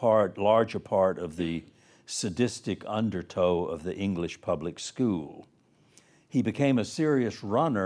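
A speech recording with no audible technical faults, and the signal holds steady and continuous throughout.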